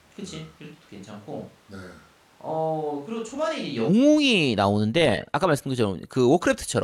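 The close microphone's signal is missing from the start until 3.87 s, so this stretch is likely a switch to a distant microphone. The speech sounds roomy and hollow, thin in the bass and about 10 dB quieter, with room noise only around 30 dB down, until the abrupt return at 3.87 s.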